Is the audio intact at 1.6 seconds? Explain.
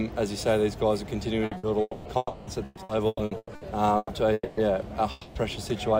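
No. Around 1.6 s the sound stalls into a short held buzz or fading hiss, then jumps ahead with a piece missing. This is a burst of packet loss spanning 1.57 to 1.66 s, the second of two close together after one at 1.45 to 1.54 s. The receiver kept extending the last good sound for about 60 ms while lowering its level. When audio resumed, about 60 ms of the original had been skipped.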